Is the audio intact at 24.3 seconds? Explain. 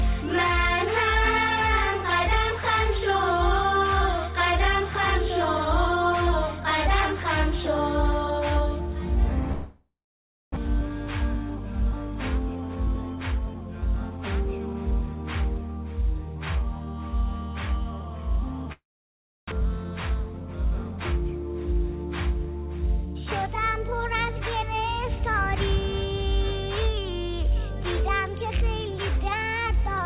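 Yes, the audio at 24.3 s is intact, carried cleanly through a WebRTC call path whose G.711 mu-law coding leaves nothing above 4 kHz.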